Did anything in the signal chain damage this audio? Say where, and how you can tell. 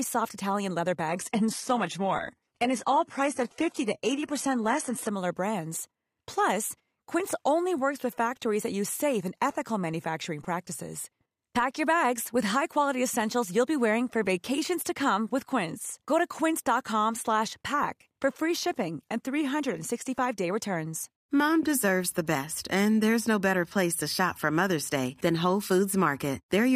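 Yes. From 1.08 to 5.08 s the treble suddenly dulls and turns synthetic, with nothing above 11.8 kHz and no gap: an adaptive stream at a lower bitrate, likely a network slowdown.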